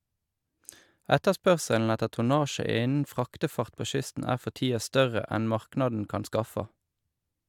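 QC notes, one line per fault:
No fault found, so there are no QC notes to list.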